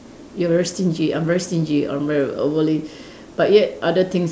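Nothing in the speech stood out as a technical problem on listening.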